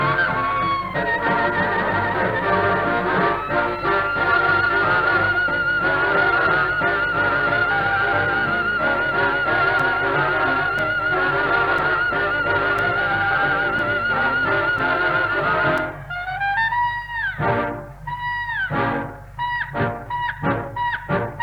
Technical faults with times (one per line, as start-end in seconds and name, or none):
0.00-21.43 low bit depth without dither
9.79-15.78 periodic USB or driver dropouts